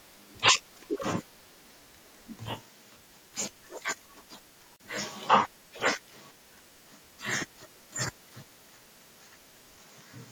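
At 4.76 s, running to about 4.80 s, the speech just drops out for roughly 35 ms and then picks up exactly where it left off. That's a gap at a join of encoded pieces: the audio was encoded in separate chunks, about 6 s long, and glued back together untrimmed, so each chunk's start-up delay and final-frame padding stayed in as silence. The edges of the hole are smeared by the codec, so the truly silent part is shorter.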